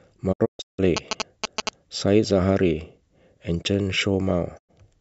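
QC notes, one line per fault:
0.32–0.80 s, digital broadcast dropout: the receiver muted on failed frames, so the speech vanishes in several holes with 20 ms fades, the longest 160 ms. The waveform shows flat gaps and the spectrogram blank vertical columns.
0.97–1.69 s, GSM signalling bursts: a nearby phone's radio bursts were rectified into a galloping dit-dit-dit of short buzzes at 217 Hz, about as loud as the speech. The spectrogram shows evenly spaced vertical stripes with harmonic lines.
4.57–4.71 s, digital broadcast dropout: a single 96 ms mute with 20 ms fades, consistent with three frames of roughly 32 ms being dropped. The waveform collapses to silence and the spectrogram shows one clean blank band.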